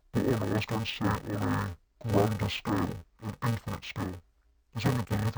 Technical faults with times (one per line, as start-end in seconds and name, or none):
0.00-5.37 interleaved audio read as planar